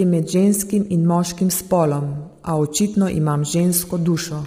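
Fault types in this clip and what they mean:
Low-delay AAC compression: the speech was likely squeezed through AAC-ELD, whose very short frames resolve pitch harmonics poorly. Heavy damage, consistent with a rate around 24 kbps, leaves the speech rough and grainy, with noise filling between harmonics and a thin, synthetic-sounding top band.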